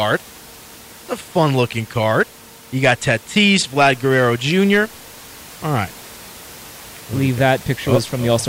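No technical faults can be heard in the speech; the only other sound is the room's own background noise, sitting about 22 dB below the speaker and belonging to the recording rather than the system.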